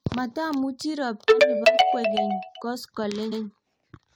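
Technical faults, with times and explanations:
3.31 to 3.43 s, repeated frames: A stretch of about 116 ms of speech plays, then plays again once straight after. That makes a short stutter. The audio was stored or sent as compressed frames, and one run of them was delivered twice. The length fits a run of about five frames. The repeat adds 116 ms to the clip.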